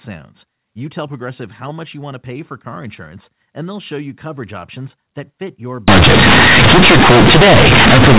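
At 5.88 s the decoder stops expanding the A-law stream and starts treating each companded byte as a plain linear 8-bit sample. This is companded audio read as linear, and it lasts to the end at 8.19 s. Every sign change now throws the output across roughly half its range, so quiet passages come out as large as loud ones and the waveform is badly distorted. The speech turns into very loud, harsh buzz, and the pauses fill with strong noise. Before that point the 8 kHz A-law telephone coding plays normally.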